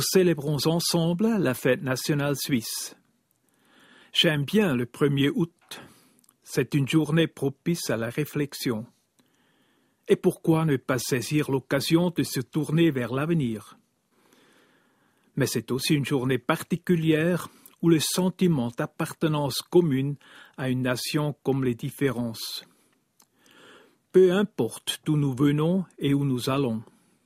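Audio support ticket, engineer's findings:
Nothing stood out on listening that would point to a fault in the audio path.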